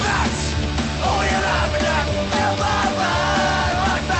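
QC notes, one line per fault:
No faults found; the call path sounds as expected, with the top end stopping near 8 kHz, which points to a bandwidth-limited Opus stream at about 32 kbps.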